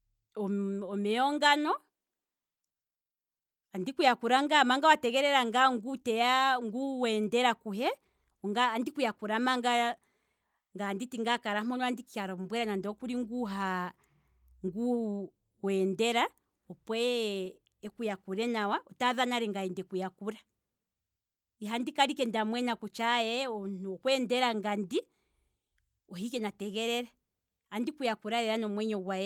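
Speech; no technical faults audible at any point.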